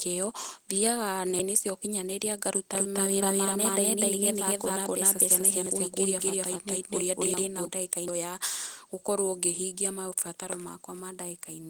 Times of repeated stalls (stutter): none

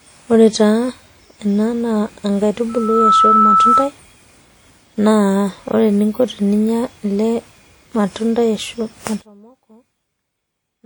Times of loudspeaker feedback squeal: 2.69-3.92

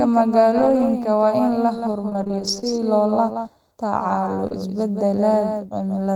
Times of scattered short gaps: 0.57-4.52

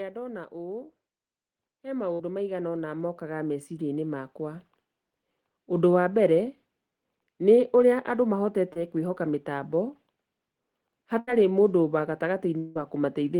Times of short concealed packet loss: 8.73-8.77

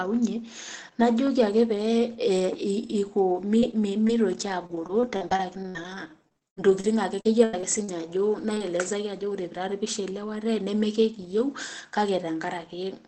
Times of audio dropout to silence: none

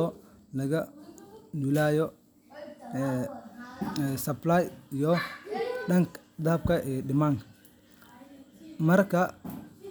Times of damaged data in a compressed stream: none

